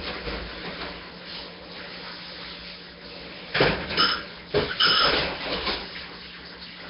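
Nellymoser compression runs through the whole recording of sounds. Nothing sounds above about 5.3 kHz, and the sound carries a rough, hissy halo with a smeared, underwater quality. The likely cause is the Nellymoser Asao codec, which spends a fixed, small number of bits on each short block of samples. Bands too weak to earn bits are filled with noise, giving heavy damage that fits a bitrate near 22 kbps.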